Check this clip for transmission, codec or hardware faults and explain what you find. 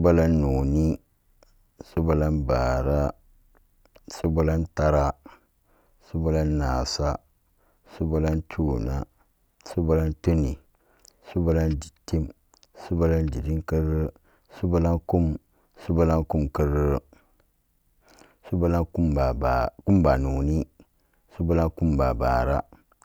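Nothing in this speech recording points to a transmission, codec or hardware problem, so there's nothing to flag here.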